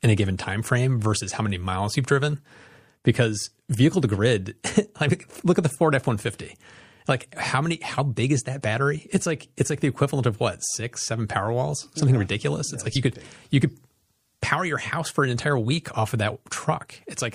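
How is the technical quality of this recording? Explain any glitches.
The recording has plainly audible compression damage throughout and one brief glitch.

MP3 compression is heard across the whole clip and is the likely cause of the watery, swirly texture. Bits run short, which fits a low bitrate around 64 kbps, so the treble is cut and weak detail flickers. On a spectrogram that shows as a flat ceiling with patchy, blinking high-frequency bins.

Compressed frames are skipped at 12.95 s, between "yeah like" and "you could big you". About one frame, roughly 30 ms, never plays, so the audio jumps ahead. Overlapping neighbours turn the join into a short smeared blip, not a click. The waveform shows a small discontinuity and the spectrogram a thin vertical smudge.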